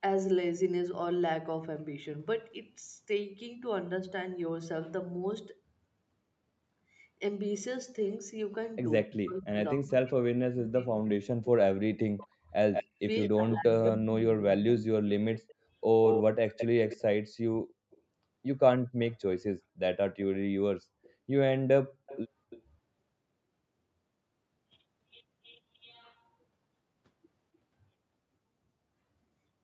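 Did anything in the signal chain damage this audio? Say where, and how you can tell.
Yes. Speech suppressed in double talk shows up at the call-processing stage. From 9.05 to 12.52 s the speech dips hard, by about 40 dB at its deepest, for roughly 3 s. From 13.45 to 14.86 s it dips by about 25 dB. The likely cause is an echo canceller treating overlapping speech as echo and turning both down.

Echo leak comes through as a delayed repeat of the speech. From 12.73 to 13.92 s it trails by 193 ms, about 5 dB below the speech. From 15.34 to 18.0 s it is as loud as the speech. Fainter repeats follow at 21.03 to 21.13 s (264 ms, about 35 dB down) and 22.06 to 22.62 s (294 ms, about 20 dB down). An echo canceller likely let loudspeaker sound through.

Background gated by the echo canceller is also a call-processing fault. From 15.44 to 15.7 s the room sound drops by about 37 dB for roughly 200 ms, then returns. 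The canceller clamped the microphone while the loudspeaker played, so the ambience vanished briefly.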